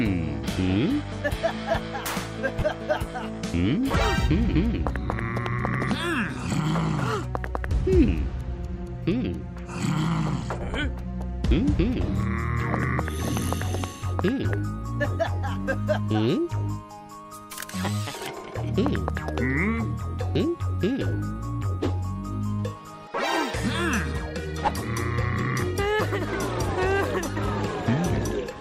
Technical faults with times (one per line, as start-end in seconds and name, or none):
2.60-2.62 lost LE Audio frames
7.69-7.71 lost LE Audio frames
10.41 lost LE Audio frames
12.06-12.08 lost LE Audio frames
14.44 lost LE Audio frames
24.67 lost LE Audio frames